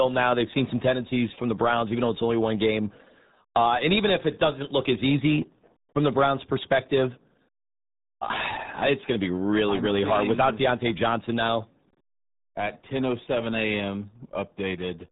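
From start to end, the speech carries RealAudio 14.4 codec damage: nothing above 3.8 kHz survives, and heavy coding artefacts make it muffled and gargly. A plain low-pass filter would only dull the sound; this added gargle fits a coarse 8 kbit/s dial-up era stream.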